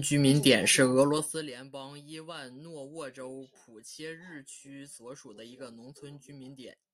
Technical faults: zipper noise

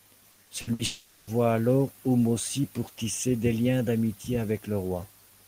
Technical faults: repeated packet loss (robotic sound); long network dropout

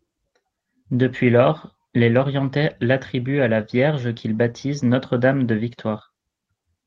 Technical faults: none

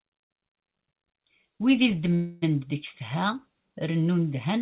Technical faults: call audio freeze

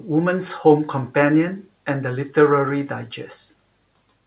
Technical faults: none

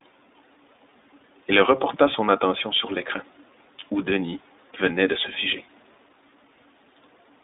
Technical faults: iLBC codec

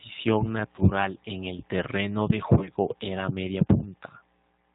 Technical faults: G.729 codec; VoIP packet loss concealed by the speech codec

